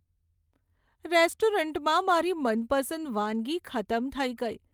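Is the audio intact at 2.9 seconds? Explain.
Yes, the audio at 2.9 seconds is intact, with no fault at that moment.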